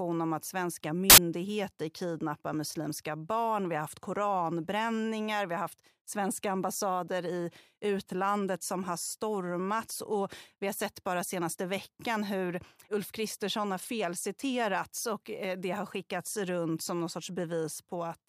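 At 1.10 to 1.18 s, right after "om att svenska", samples built from the wrong bytes turn the low bits into loud, harsh broadband noise, a full-height spectrogram block and a dense, high-amplitude waveform.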